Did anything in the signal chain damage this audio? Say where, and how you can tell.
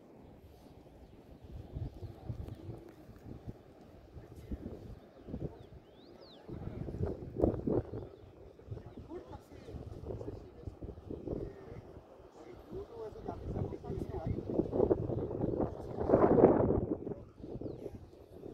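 No, nothing in the signal chain stood out as a problem on listening to this audio.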